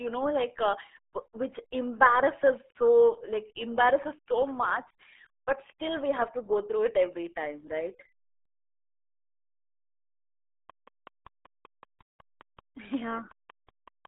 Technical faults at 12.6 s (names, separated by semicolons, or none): RealAudio 14.4 codec; train of clicks